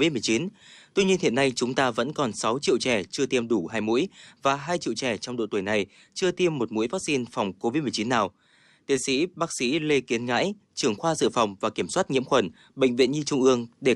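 No technical faults can be heard anywhere in this recording.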